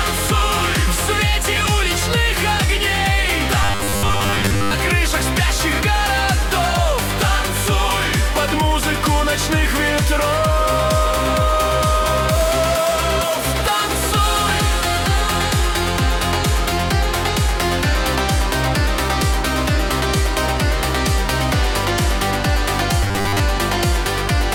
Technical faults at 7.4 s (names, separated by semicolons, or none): none